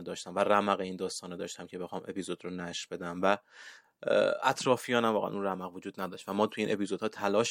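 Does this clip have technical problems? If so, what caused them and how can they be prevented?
No, there are no technical faults in this speech clip. Nothing in it calls for a fix, so no preventive step is needed.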